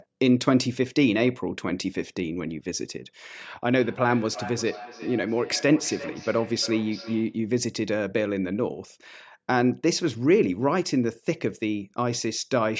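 From 3.81 to 7.44 s there is feedback echo between two devices. A second device plays the call back into the microphone, and neither echo canceller removes it. The speech returns roughly every 400 ms, peaking at about 15 dB below the direct speech.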